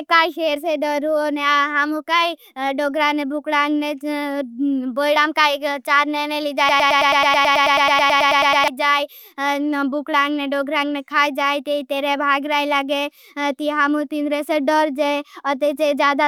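A broken-record loop runs from 6.69 to 8.68 s: a 108 ms fragment of the speech repeats exactly, back to back, 18 times, giving a rapid stutter. The likely cause is a stalled player or stream resending its last held fragment, so the speech due there is lost.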